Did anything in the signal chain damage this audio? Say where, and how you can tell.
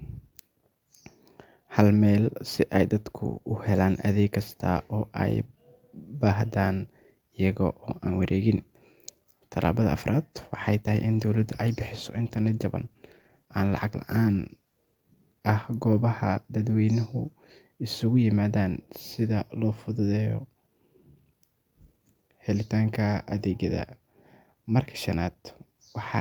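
Yes: from 10.36 to 15.07 s the speech turns rougher and duller, the sound of a call bitrate drop, fitting an encoder cut from roughly 64 to 24 kbps.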